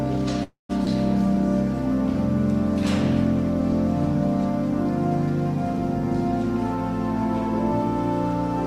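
At 0.43 s the audio stalls until 0.71 s, which sounds like a call audio freeze. The last bit of sound gets stretched into a buzzy or hissy tail that fades, and the back 150 ms or so of that hold is plain silence. The likely cause is packets held up in transit, leaving the jitter buffer empty. When they turned up, playback picked up exactly where it paused, so nothing's lost, but everything after lands about 259 ms later.

Just after, from 0.85 to 0.88 s, there's a skip ahead. Playback jumps forward with almost no gap, only a few milliseconds of fill, and the two sides are butted together. Around 70 ms of audio is gone, probably dropped in transit or flushed when the jitter buffer got crowded with later audio. It claws back roughly that much of the delay the freeze added.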